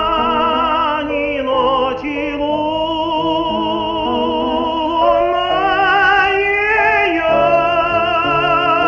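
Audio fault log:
No audible faults found.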